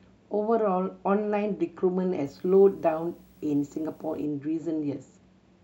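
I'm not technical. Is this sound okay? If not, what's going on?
No. A screen or video cable leaked into the audio, causing video or display buzz: a faint 60 Hz buzz with hiss and a thin 15.7 kHz whine, from 2.25 to 4.25 s.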